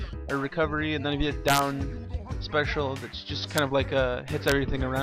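Integer overflow strikes three times. The first runs from 1.48 to 1.59 s, driven about 4 dB past the limit. A brief one follows at 3.58 s, right at the limit. The last spans 4.48 to 4.52 s, about 1 dB over. Each time, peaks exceed the largest integer value and wrap to the opposite sign instead of being held. The waveform flips across its full range. Violent cracks result, far harsher than clipping.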